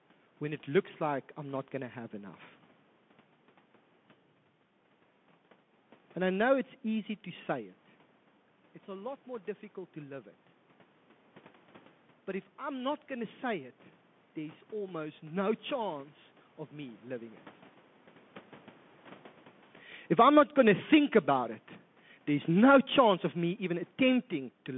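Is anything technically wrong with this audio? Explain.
Yes, there are two problems. Throughout the speech, the sound is thin and boxy. Sibilants are scratchy, a fine granular hiss sits under everything, and louder bright sounds crunch. This is the Bluetooth CVSD headset codec. It encodes the signal as a single up-or-down bit per sample with an adapting step size, which fits a 64 kbps CVSD link. The line passes only about 150 Hz to 3.5 kHz. When the step can't keep pace with fast, loud changes, slope distortion appears, and the coarse steps leave the grainy hiss.

From 20.04 to 24.38 s, the level sinks steadily by about 7 dB, and the room background drops along with the speech. This is automatic gain falling. The gain control judged the input too loud, or its background noise too strong, and pulled its gain down gradually, so everything it passes gets quieter together. Because the background falls too, this is a gain change rather than the talker moving, which happens naturally around 7.5 s and 19 s.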